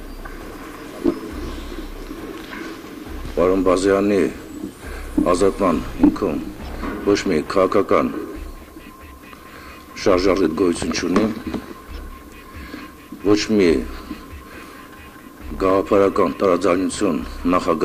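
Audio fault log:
No audible technical faults are present in the signal at any point.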